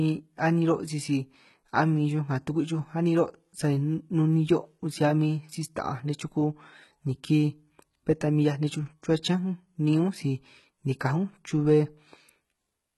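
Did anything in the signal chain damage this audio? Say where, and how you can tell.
Yes, at the codec stage, throughout the speech. The treble is bright but false, and nothing sounds above 11.8 kHz. Sibilants turn gritty and metallic. That points to heavy HE-AAC compression, likely at around 16 kbps, with treble copied upward from lower bands rather than coded.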